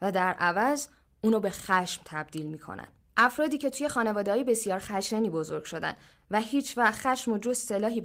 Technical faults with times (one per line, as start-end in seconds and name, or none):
none